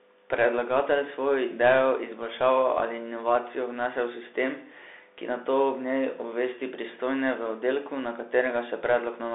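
Speech runs through the Bluetooth CVSD headset codec throughout, which fits 64 kbps one-bit delta coding. The band sits at about 300 Hz to 3.6 kHz with nothing above 3.8 kHz. Unlike plain phone-line filtering, a granular hiss lies underneath, and s sounds turn scratchy where the adaptive step can't keep up.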